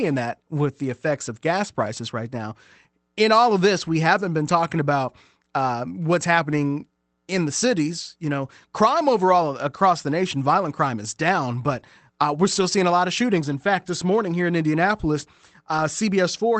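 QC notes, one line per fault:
6.51–6.53 s, 12.55–12.61 s, 13.51–13.53 s and 15.77 s: lost packet rebuilt from error correction. Each spot has a brief rough, noisier patch with no dropout, about 20 ms long except the 40 ms one at 12.55 s, which fits two separate lost packets. The missing audio was filled from the lower-bitrate backup copy carried in the following Opus packet, so the sound continues but is coded more coarsely for that stretch.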